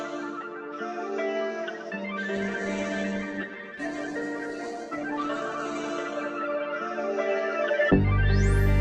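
From 2.37 s the sound turns rough and watery, and its top end dulls. The brightness above about 12 kHz disappears. This lasts until 8.69 s, with the worst stretch holding for about 3 s. This is a call bitrate drop. The bandwidth estimate fell, so the encoder had to code with far fewer bits, and it narrowed the audio band to save them. The coarseness fits a fall from about 96 kbps to about 11 kbps.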